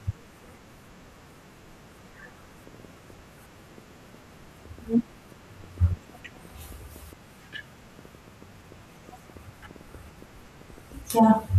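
Speech with a train of clicks running from 2.67 s to 11.23 s: around forty similar pops at about 4.7 per second, unevenly spaced, peaking roughly as loud as the speech and audible in pauses too, likely from nearby equipment interference. Their repeated shape separates them from random crackle.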